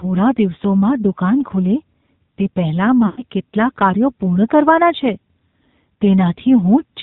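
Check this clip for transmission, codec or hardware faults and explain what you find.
Two faults are present: codec damage throughout the speech and a short burst of lost frames.

AMR narrowband mobile codec, whole clip: nothing above 4 kHz survives, and a buzzy, synthetic texture from low-bitrate vocal-tract modelling, consistent with about 7.4 kbps, separates it from plain band-limiting.

Lost AMR speech frames, 3.06 to 3.22 s, between "તે પહેલાં" and "કેટલા કાર્યો પૂર્ણ કરવાના": about 120 ms, which fits six lost 20 ms frames. The decoder repeats the last pitch and vocal-tract settings at falling gain, so the sound smears and fades rather than cutting to a hard gap.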